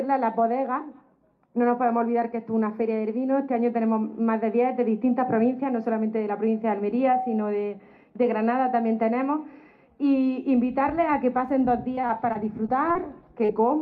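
Repeated packet loss (robotic sound) runs from 11.95 to 12.97 s, with six separate gaps, the longest 33 ms. Each gap is patched by extending the preceding sound before the next arrives, so about 11 percent of the stretch is synthetic, giving a choppy texture with pieces missing.

Short concealed packet loss follows at 13.45 to 13.51 s, where 40 ms of audio never arrived in time. The receiver filled the hole by continuing the last sound and blending back into the real signal, heard as a brief smear or wobble.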